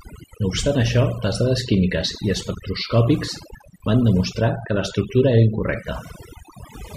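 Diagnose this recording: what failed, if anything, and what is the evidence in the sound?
The background is pulled down from start to finish and flecked with small twinkling specks where the noise used to be. That points to overdone noise removal in the call processing stage. A noise reducer set far too hard is switching individual frequency bands down or off whenever they sit close to its noise estimate, and the quieter components of the voice are being cut along with the noise.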